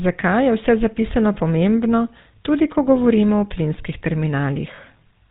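A buzzy, gravelly roughness runs through the whole speech clip, with nothing audible above 4 kHz. This is the GSM full-rate codec at plainly audible strength, at a rate that points to about 13 kbps. It rebuilds the voice from a vocal-tract model driven by a sparse pulse train, which produces the grainy texture.

From 4.76 to 4.79 s the sound briefly freezes into a short metallic ring. This is a lost GSM frame. The decoder filled the roughly 20 ms gap, which fits a single missing frame, by repeating the previous frame's settings.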